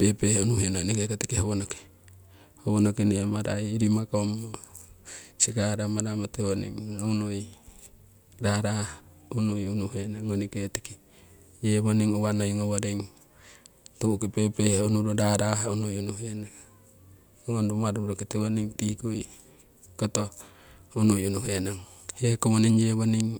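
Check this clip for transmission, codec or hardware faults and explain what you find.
Nothing faulty turns up anywhere in this speech recording. Listening closely across its whole length reveals nothing to report.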